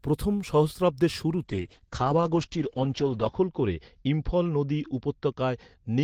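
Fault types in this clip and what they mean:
Call bitrate drop, 1.45 s to the end: the encoder gets far fewer bits, so the speech turns coarse and watery and its bandwidth shrinks from 20 kHz to 8 kHz. That fits a fall from 32 to 8 kbps, bottoming out for 1.92 s.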